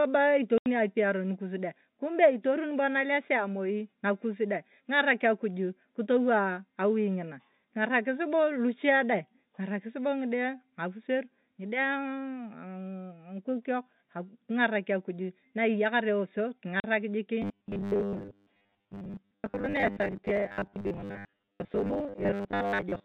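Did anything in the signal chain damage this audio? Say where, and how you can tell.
Yes. Packet loss filled with silence, a network fault, cuts holes at 0.58 to 0.66 s (80 ms) and 16.8 to 16.84 s (40 ms). Both gaps are multiples of 20 ms, which fits lost 20 ms packets replaced by digital silence. Their edges are abrupt.

Robotic sound from repeated short buffers runs from 17.42 s to the end, at the driver or buffer stage. A rigid, metallic buzz at 100 Hz rides over the sound. The likely cause is starved playback repeating a 10 ms buffer while most of the real audio is skipped.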